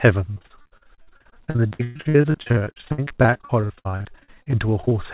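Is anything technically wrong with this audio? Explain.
Yes. From 0.34 to 4.93 s the speech suffers repeated packet loss, heard as robotic sound. Dozens of short dropouts, the longest about 117 ms, are each patched by stretching the preceding audio, leaving choppy speech with pieces missing. A spectrogram shows repeated smeared, flattened patches amid fine detail, and the waveform shows abrupt seams and stretches of looped sameness. On the call path the audio stops sharply at 4 kHz, consistent with a narrowband G.711 A-law link.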